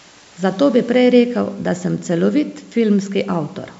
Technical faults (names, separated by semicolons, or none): none